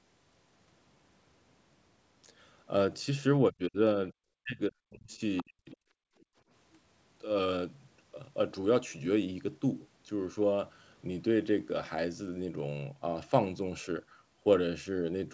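Between 3.49 and 5.84 s, the echo canceller likely lost track during double talk and turned the microphone down along with the echo. This is speech suppressed in double talk. The speech drops by roughly 35 to 40 dB in four bursts: 3.49–3.76 s, 4.1–4.17 s, 4.42–5.2 s and 5.41–5.84 s. The longest burst lasts most of a second, leaving the speech dipping or cutting out.

From 5.37 to 5.43 s, leftover loudspeaker echo likely slipped past the canceller. This is the other side's voice leaking through. It is a brief scrap of a second voice, roughly 20 dB below the main speech, and it sits right at the start of the last suppressed stretch.

From 6.12 to 6.36 s, the background is gated by the echo canceller. The canceller clamped the microphone while the loudspeaker played, and the room sound dips by about 34 dB for around a fifth of a second before returning.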